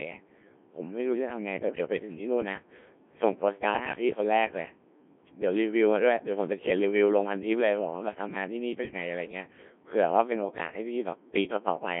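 Throughout, the speech has passed through a Codec 2 vocoder at a rate that fits about 1.3 kbit/s. Rebuilt from sine waves using only pitch, voicing, energy and a coarse envelope, it sounds robotic and buzzy. A spectrogram shows harmonic stacks between 200 Hz and 3.5 kHz, with nothing above 3.8 kHz.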